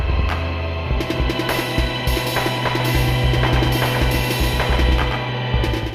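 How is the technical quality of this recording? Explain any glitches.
One glitch. From 2.8 s to the end, a doubled audio track: a second full-band copy trails roughly 150 ms behind, about 5 dB quieter, starting abruptly, likely from a slower duplicate capture path.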